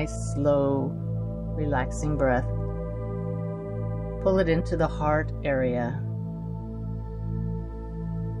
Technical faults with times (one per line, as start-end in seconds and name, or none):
none